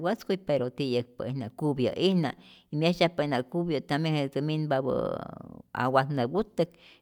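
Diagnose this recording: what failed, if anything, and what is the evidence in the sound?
Nothing failed: no stage of the chain, from capture through to playback, leaves any audible fault anywhere in the speech.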